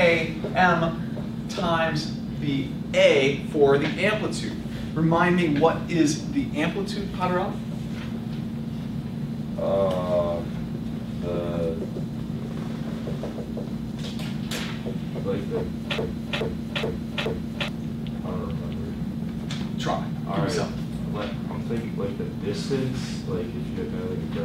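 At 15.98 s the sound locks into a broken-record loop: a fragment about 0.42 s long plays four times back to back, exactly identical each pass, until 17.68 s. This most likely happened because the player or stream stalled and kept resending the last piece it held, so the audio that belonged in that span is gone. Unlike an echo or a stutter, the repeats do not fade, shift or overlap. Each pass is a clean copy that butts straight against the next.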